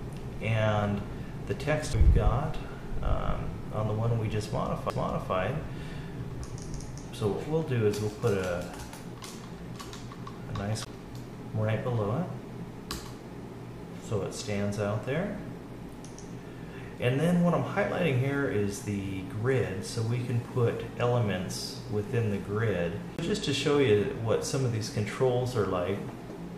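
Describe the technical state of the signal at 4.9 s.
At 4.9 s there is a CD skip. The laser pickup loses its track and lands on another turn of the disc's spiral, so the player briefly mutes its output, for roughly 5 ms, and then resumes from a different position in the programme. It sounds like a short tick followed by an abrupt discontinuity, with the audio continuing from a point displaced by a whole number of disc revolutions rather than from where it left off.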